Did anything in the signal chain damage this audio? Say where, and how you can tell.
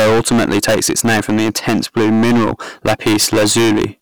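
Yes. Hard clipping runs through the entire speech clip: every loud syllable carries a harsh fuzz. The signal was driven about 21 dB beyond what a converter or sample-format stage could pass, so nearly a third of samples were flattened at that stage's limit, adding high harmonics.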